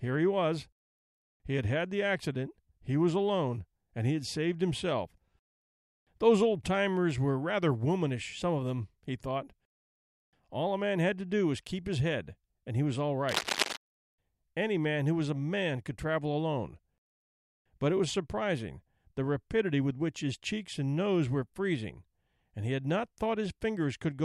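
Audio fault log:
13.29–13.77 s, cable scratch noise: right after "and he was all", dense, uneven scratching about as loud as the speech, likely a worn connector's contact resistance fluctuating.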